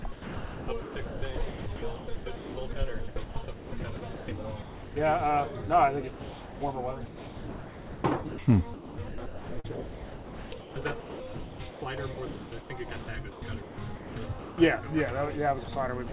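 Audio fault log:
0.02–4.96 s, 6.1–14.58 s, 15.64–16.13 s: sound chopped by the voice detector. The sound keeps dropping into flat hiss, about 2.6 s, 4.9 s and 0.09 s in total. This is likely comfort noise replacing detected quiet. On a spectrogram it shows as smooth, featureless noise between abrupt waveform bursts, all below 4 kHz.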